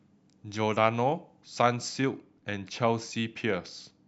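De-emphasis applied wrongly from 1.89 s to the end of this speech clip: an unneeded treble cut slopes the highs down smoothly, by about 8 dB at 10 kHz, so the sound turns dull and muffled.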